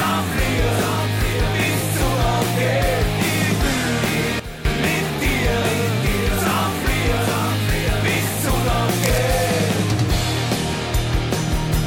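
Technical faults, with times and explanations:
4.40 to 4.65 s, sudden gain jump: the level drops abruptly by about 12 dB, and the background noise drops by the same amount, then both return to their earlier level about a quarter second later. Each edge is an instant step, which likely comes from a digital gain change applied without a ramp. A fade would move smoothly, and a dropout would remove the sound entirely. Here the sound continues at a lower level with its noise floor scaled down alongside it.
9.03 to 9.18 s, cable scratch noise: a short burst of dense, irregular crackle and rustle sits over the sound for about 0.16 s, roughly ten decibels below it. The uneven, gritty texture points to contact resistance changing rapidly at a worn cable, connector or control that is likely being moved. A single digital click would be one sharp tick, and steady hiss would be even. This burst is a cluster of fluttering noise with no regular pattern.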